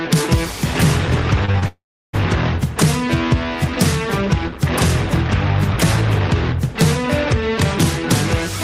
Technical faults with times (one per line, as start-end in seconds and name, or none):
1.45-1.64 short concealed packet loss
1.68-2.15 long network dropout